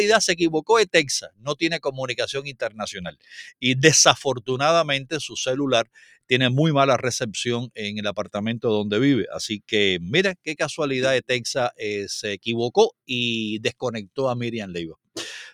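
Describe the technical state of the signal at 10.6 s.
At 10.6 s the signal is under a noise suppressor applied to music or sounds, active across the whole clip. Tuned for speech, it treats sustained tones, ambience and reverb tails as noise and pulls them down by around 10 dB, while attacks pass. The result is pumping and a thinned, fluttering decay. On a waveform, the envelope drops sharply after each onset; a spectrogram shows sustained partials and tails fading or flickering patchily instead of decaying smoothly.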